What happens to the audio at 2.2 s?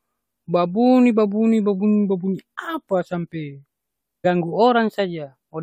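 Nothing goes wrong at 2.2 s; the speech there runs on intact, with no dropout, click, distortion or other fault.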